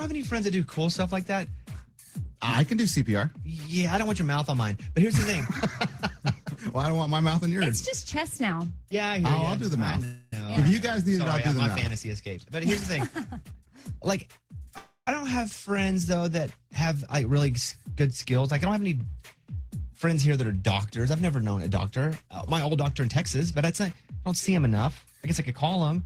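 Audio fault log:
10.04–10.33 s and 14.78–15.08 s, call audio freeze: packets were likely held up in transit and the jitter buffer ran dry, so the last sound is stretched into a fading buzz or hiss for about 0.28 s and 0.29 s. The second ends in about 90 ms of silence. Playback then resumes where it stopped, inserting a pause rather than dropping audio.
11.77–11.91 s, loose connector crackle: a worn or dirty contact is making and breaking as it shifts, chopping the signal on and off in quick irregular bursts, which is heard as a short scratchy crackle lasting about 0.15 s.
13.41–14.67 s, 17.14–17.48 s, 17.88–18.64 s and 22.75–24.74 s, jitter buffer speed-up: the buffer had built up more audio than its target, so the receiver repeatedly cut out pitch-period-sized slices to reduce the delay. The audio runs faster at unchanged pitch, about 114%, 113%, 106% and 112% of normal speed. It sounds hurried, with roughly a fifth of a second removed in the first stretch and about 0.3 s in the last.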